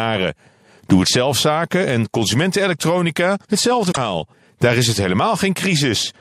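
At 3.88 to 3.97 s, just after "het zelfzaken en consumentenelektronica", damaged data in the compressed stream makes the decoder misread its frames and lose sync while it hunts for the next valid header, so about 90 ms of speech becomes a brief garbled blip.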